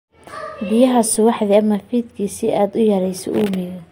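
At 1.15 s a single low thump cuts in under the speech: a DC step, the waveform's zero line jumping by about -31 dBFS, then decaying through a 20 Hz high-pass.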